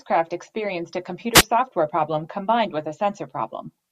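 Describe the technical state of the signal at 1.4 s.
At 1.4 s the speech is inside a wireless microphone noise hit from 1.33 to 1.43 s, between "experienced a" and "software problem combined with". The FM radio link fades under cancelling reflections, so receiver noise rises as a brief swish of static, seen as a broadband vertical smear.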